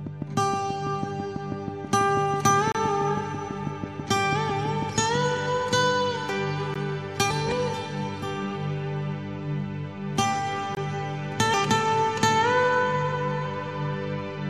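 Right from the start, at 0.07 s, there's a train of clicks that runs until about 5.16 s. It's a steady ticking, roughly six clicks a second, around thirty in all, each much like the last and poking out about 10 dB above the sound. That regular, identical pulse is most likely interference from nearby equipment or a faulty connection or power supply rather than anything in the source.

Overlapping that, at 2.72 to 2.75 s, you get the first gap between stream segments: a hard-edged hole of about 29 ms where the audio just drops to silence. It comes back at 6.74 s, a shorter one of about 15 ms, and again at 10.75 to 10.77 s, about 20 ms. Those are spaced four seconds apart, which fits segments whose time stamps don't quite meet, with the player filling the difference with silence. None of the audio goes missing. It's just pushed later by the inserted silence.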